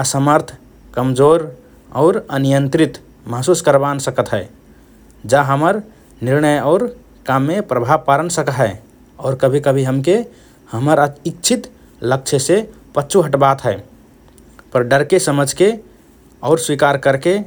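No audible technical faults.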